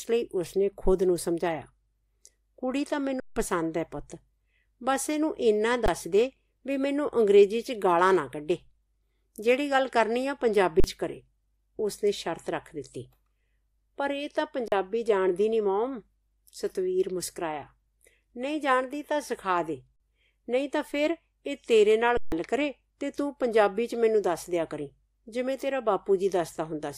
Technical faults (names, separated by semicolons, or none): underrun with held sample